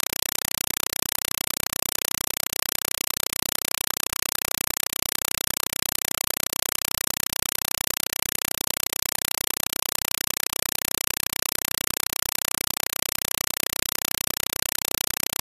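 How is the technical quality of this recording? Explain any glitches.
The technical quality is very poor: for the whole recording, the speech is replaced by loud, chattering static. This is a compressed stream played as audio. An AC-3 (Dolby Digital) bitstream was treated as ordinary samples instead of being decoded. Each frame becomes a 4 ms burst of noise followed by digital silence, repeating 31.25 times a second, which fits a 192 kbps stream. That steady 31 Hz chatter of bursts and gaps sets it apart from plain broadband hiss or clipping distortion.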